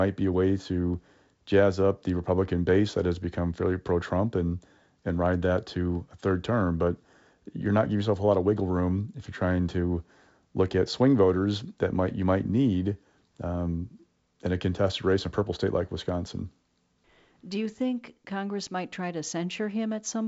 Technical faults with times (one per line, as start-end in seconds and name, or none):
none